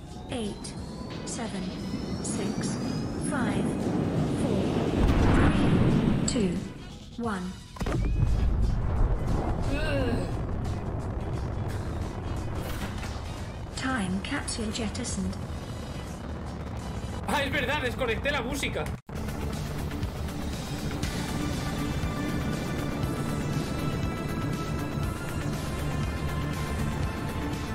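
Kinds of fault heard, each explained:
Clock drift buffer slips: A click recurs every 0.6 s, 0.57 to 27.57 s. Likely mismatched clocks, about 300 ppm apart, dropping or repeating samples.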